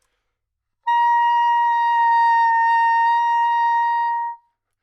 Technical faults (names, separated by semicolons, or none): none